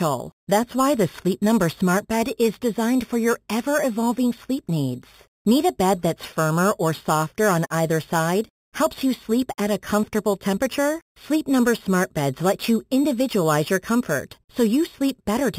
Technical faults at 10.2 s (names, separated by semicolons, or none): imaging from sample-and-hold upsampling